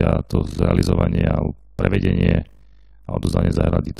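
A deep, rapid flutter runs through this speech clip from start to finish, chopping the level up and down so hard that it takes on a buzzy, robotic tremolo. That is overlap-add ripple: the audio was split into windowed frames and reassembled with an overlap whose windows do not add up to a constant gain, so the level dips once per frame. The modulation sits at around 50 Hz, with troughs roughly 60 dB down.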